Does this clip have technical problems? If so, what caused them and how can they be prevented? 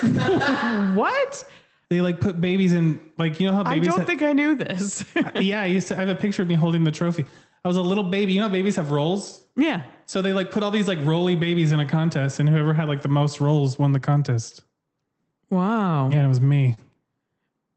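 Yes. There are four related timing faults.

Clock drift between sender and receiver runs through the whole clip. The sender's clock runs roughly 2 percent slow. The receiver's jitter buffer keeps draining. It must keep stretching the sound to stay fed. Locking both ends to a common clock or using adaptive resampling prevents this.

Repeated timing corrections follow from that drift, from 0.30 s to 17.68 s. The receiver repeats short pieces throughout, always in the same direction. Playback runs at about 98 percent speed. Roughly 300 ms is added overall. Smooth resampling instead of piece-by-piece edits prevents this.

Scattered short gaps occur between 5.85 s and 6.86 s. About three packets arrived late or were lost. Each hole was tiny, around 10 ms at most. The receiver filled each one by continuing the previous sound, leaving brief ticks or smears. A steadier network or forward error correction prevents this.

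A short stall from a late packet occurs at 16.74 s to 16.79 s. The jitter buffer ran empty. The receiver held the last sound for 27 ms until the packet arrived, then resumed where it left off. Nothing is missing, but the sound hangs slightly. A somewhat deeper jitter buffer prevents this.

The audio passed through a call path whose top end stops near 8 kHz, which points to Opus at about 20 kbps.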